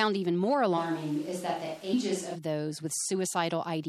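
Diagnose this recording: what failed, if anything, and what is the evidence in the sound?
The codec stage is the likely cause of the damage heard throughout: MP3 compression at a low bitrate, which fits around 64 kbps. Treble is cut off, and weak frequency components flicker in and out between frames, giving the speech a plainly audible watery, swirly texture with smeared consonant attacks.

At the capture stage, the close microphone's signal likely dropped out from 0.79 s, just after "even more", until 2.34 s. The recording switched to a more distant pickup, which is what this sounds like. The speech abruptly turns roomy and hollow with thinner bass and room noise about 25 dB below the speech, though the level barely changes.

At the storage or decoding stage, compressed frames were skipped at 1.92 s. Roughly a tenth of a second of audio is missing, which fits about four 26.1 ms frames being dropped. 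Because adjacent frames overlap, the jump is heard as a brief smeared blip rather than a sharp click.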